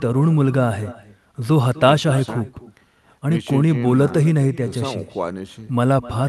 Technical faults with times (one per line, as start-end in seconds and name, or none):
0.00-6.28 echo with no canceller